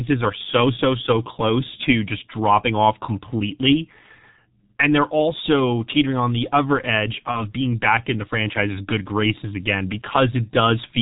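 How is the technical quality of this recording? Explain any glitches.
The technical quality is poor. The whole recording carries heavy low-bitrate codec damage, and one short concealed dropout appears late in the clip.

The G.723.1 codec degradation runs from start to finish. This telephony coder models the voice in 30 ms frames at very low rates, and the sound fits its 6.3 kbit/s mode. Its vocal model updates slowly and nothing above 4 kHz survives. The speech comes across muffled and hoarse, with smeared consonants, and the damage is heavy enough to be obvious throughout.

The VoIP packet loss concealed by the speech codec falls at 7.31 to 7.48 s, right after "on the other edge" and before "being back in the". The gap fits a single lost 30 ms frame. The decoder filled it by extending the last pitch and spectral shape at falling gain, so a brief stretched buzzy tone or fading coloured noise replaces the sound. 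Because each frame depends on the previous one, the voice stays weakened and distorted for a while after audio resumes, which stretches the glitch to about 0.16 s.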